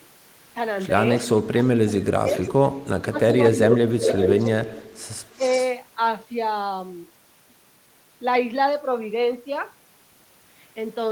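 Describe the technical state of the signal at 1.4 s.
Echo leak runs from 1.17 to 1.69 s: a faint delayed copy of the speech trails it by about 348 ms, roughly 25 dB below the direct sound. It is likely a far-end loudspeaker pickup that the echo canceller failed to fully remove and sent back.

Speech suppressed in double talk spans 1.37 to 3.79 s: the talker's level dips in pieces, at worst by roughly 25 dB, for around one and a half seconds in all. This likely comes from the canceller confusing overlapping speech with echo and attenuating both.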